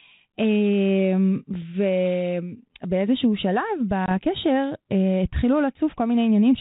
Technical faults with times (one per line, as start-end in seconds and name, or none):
4.06-4.12 packet loss on an ADPCM call